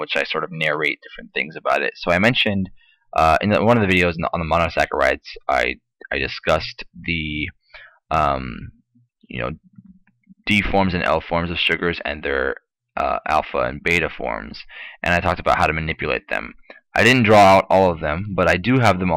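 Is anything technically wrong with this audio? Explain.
Yes. Hard clipping runs throughout: the signal is driven about 4 dB past what the stage can pass, so peaks are sliced flat, roughly one percent of samples. The waveform shows squared-off tops, the spectrogram shows broadband harmonic smears on peaks, and it sounds like crackle on loud moments.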